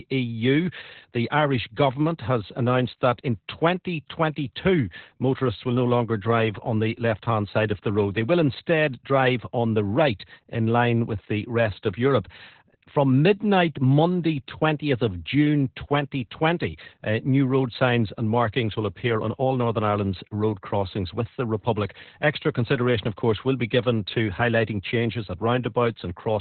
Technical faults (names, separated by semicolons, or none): Opus voice compression